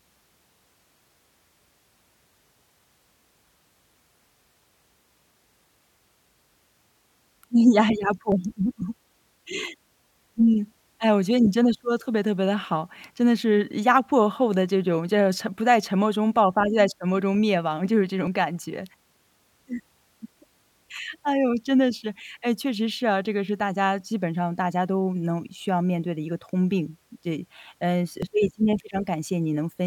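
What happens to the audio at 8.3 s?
At 8.32 s the speech skips: about 50 ms of audio goes missing, and the two sides are butted together with no silence between them. This is likely audio missing between chunks, fitting 10-second chunks. A dropout would leave an audible silent gap instead.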